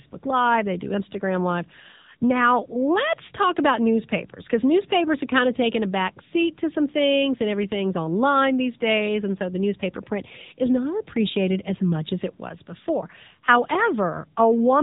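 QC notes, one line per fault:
Throughout: AMR narrowband mobile codec. Nothing passes above about 3.8 kHz, so the spectrogram shows a hard ceiling with empty space overhead. The buzzy, synthetic speech comes from a pulse-driven vocal-tract model squeezed into few bits, which fits roughly 7.95 kbps AMR-NB.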